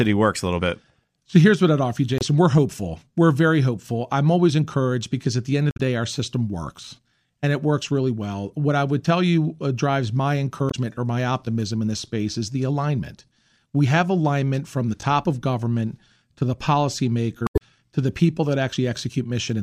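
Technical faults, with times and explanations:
2.18–2.23 s, 5.68–5.80 s, 10.67–10.75 s and 17.44–17.62 s, damaged data in a compressed stream: brief chirps or squawks break the speech after "what I'd offer you", between "because at the end" and "day our system works", and before "to the". Corrupted bytes make the decoder misread frames and lose sync until it finds the next valid frame header.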